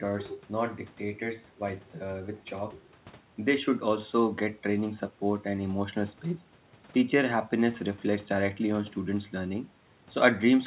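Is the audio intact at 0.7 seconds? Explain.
Yes, the audio is intact at 0.7 seconds, with no dropout, distortion or other fault at that moment.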